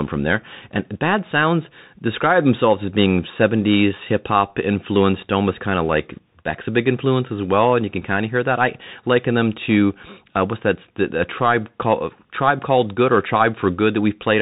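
From start to finish the speech carries Bluetooth CVSD headset codec damage, which fits a 64 kbit/s link. The one-bit delta encoder cuts everything above 4 kHz, s sounds turn scratchy where the adaptive step can't keep pace, and granular hiss sits beneath the voice.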